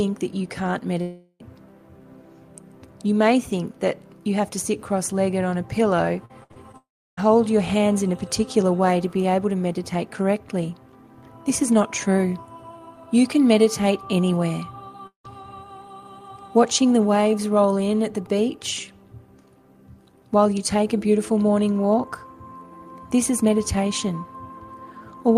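At 1.01 s there's a hole of about 0.4 s that sounds like a long network dropout, most likely audio that never arrived. The receiver papers over nearly all of it by stretching the last sound into a fading buzzy smear, and there's only a hint of silence before the sound picks up again at 1.41 s, minus the bit that went missing.

From 6.25 to 6.75 s you get repeated packet loss, the classic robotic stretch. There are four separate gaps, the longest about 63 ms, and about a third of that half-second is patched rather than real audio. Each hole gets filled by continuing the previous sound, then the next one hits right after, so it comes out choppy with chunks missing.

Straight after that, at 6.77 s, comes another long dropout, again likely lost packets, this time about 0.4 s. The concealment gives up quickly here: a short fading tail, then roughly a third of a second of flat silence before the audio resumes at 7.19 s.

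The last one is at 15.07 s, a shorter dropout of about 0.18 s. It's likely the same network cause, and you hear a brief smeared continuation followed by around 0.12 s of silence. The audio comes back at 15.26 s with that piece gone.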